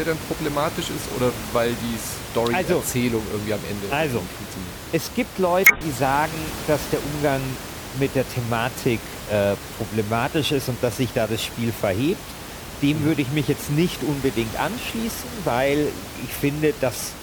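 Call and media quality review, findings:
Damaged data in the compressed stream, 5.63 to 5.81 s, just before "sagen dass der": a brief disruption in the speech. Probable component is the decoder input: corrupted bytes make frames unreadable, and the decoder loses sync until it finds the next valid frame header. Room noise sits about 11 dB below the speech.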